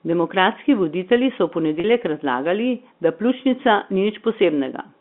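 At 1.8 s there is packet loss with pitch repetition: a 40 ms gap, about two packets, bridged by repeating the last pitch period, heard as a brief buzzy hold.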